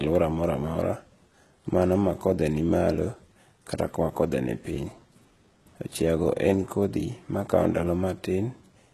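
From start to finish the speech has a bright but synthetic top end: s sounds come out gritty and lispy, with a metallic sheen that doesn't match the body of the voice, and nothing at all is present above 12.4 kHz. The likely cause is heavy HE-AAC compression, at a rate that fits roughly 16 kbps. Only the lower band is truly coded, and the treble is rebuilt by copying lower content upward, so its harmonics misalign with the real ones.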